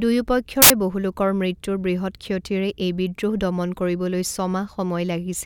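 At 0.62 s the speech is swallowed by a burst of loud, harsh broadband noise lasting about 80 ms, ending at 0.70 s just before "বহু লোকৰ মৃত্যুৰ বৃহৎ". This is samples built from the wrong bytes: for that stretch the reader assembled each sample with its bytes misaligned or in the wrong order, so the rapidly fluctuating low-order bits became the dominant part of every value, turning the waveform into broadband noise.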